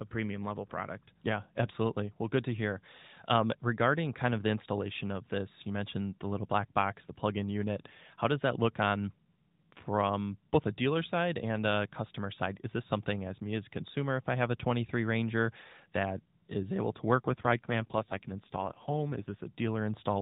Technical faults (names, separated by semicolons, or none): AMR rate drop